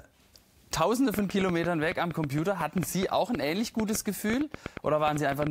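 From 1.14 s to 5.48 s a train of clicks runs over the sound: around thirty short, similar pulses arriving at an uneven pace, averaging about six per second. They stand out as sharp ticks and pops roughly 10 dB above the surrounding signal, and they carry through quieter moments as well. Pulses this uniform but irregularly spaced most likely come from electrical interference from nearby equipment or a faulty connection or power supply.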